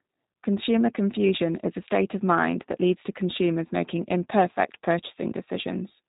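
Throughout, G.729 codec damage makes the speech plainly rough and synthetic, pitch-pulse rebuilt; the spectrogram is empty above 4 kHz, fitting 8 kbit/s G.729A.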